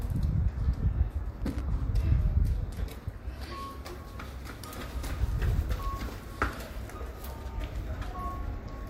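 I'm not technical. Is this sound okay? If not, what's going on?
No, there's a short burst of loose connector crackle from about 1.41 to 1.61 s. It sounds like a rough, irregular scratching, as if a worn or dirty plug was wiggling and briefly losing contact, chopping the sound.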